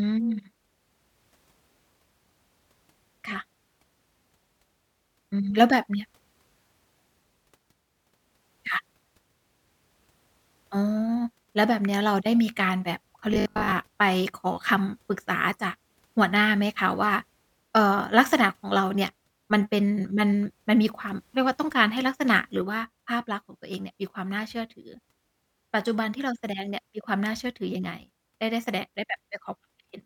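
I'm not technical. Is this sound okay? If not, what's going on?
No. From 13.34 to 13.72 s there's robotic sound from repeated short buffers: the speech turns into a metallic buzz, likely because audio arrived too slowly and tiny snippets were looped.

From 22.62 s to the end, one channel drops out. The speech suddenly gets noticeably quieter, likely because one side of the stereo signal was lost.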